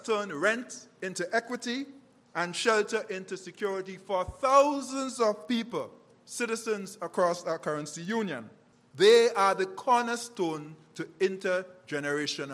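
Throughout the audio, a steady tick runs at 20 Hz, the mark of a resampler restarted on every block. The conversion from 48 kHz to 24 kHz treats each 50 ms block in isolation, so the filter at each block edge works from missing or wrong neighbouring samples and leaves a small error there. Unlike a dropout or buffer underrun, nothing goes missing, and unlike mains hum, the ticking stops whenever the signal goes quiet.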